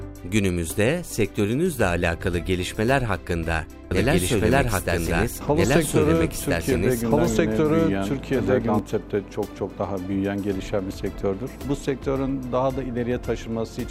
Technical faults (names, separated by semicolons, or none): doubled audio track